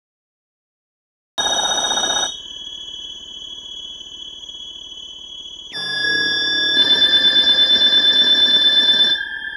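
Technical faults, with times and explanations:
0.00–1.38 s, cut-off start: the capture or stream came up late, so nothing was written for the first 1.38 s and the file holds pure digital silence there. At 1.38 s the sound switches on already under way, partway through an event rather than at its beginning. Because the opening was never recorded, there is no natural onset or fade-in, just an abrupt jump from silence into the sound.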